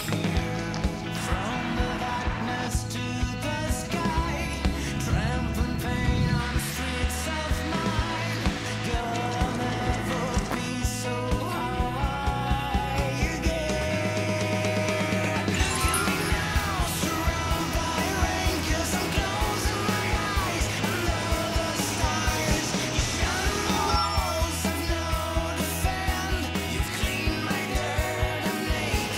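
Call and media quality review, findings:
No call or media quality faults found.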